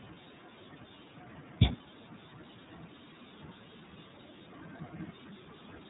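iLBC codec damage runs throughout this speech clip: nothing passes above 3.8 kHz, and independently coded frames give a plainly rough, synthetic texture, consistent with the 13.33 kbps, 30 ms mode.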